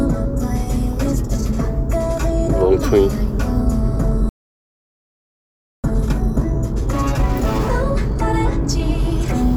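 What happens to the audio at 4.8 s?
At 4.8 s the audio is in the middle of a silence: the sound cuts off abruptly at 4.29 s and nothing is heard until 5.84 s, a gap of about 1.55 s before it returns. This is a playback stall. The player was likely starved of data or had its audio thread blocked, so it had nothing to send to the output and fell silent for the whole span until it recovered.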